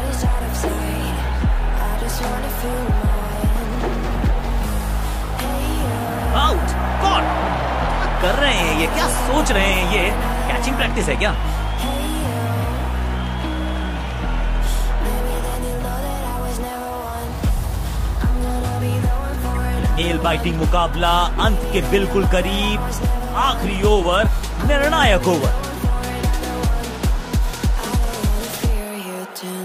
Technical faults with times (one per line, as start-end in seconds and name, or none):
19.55 corrupt frame decoded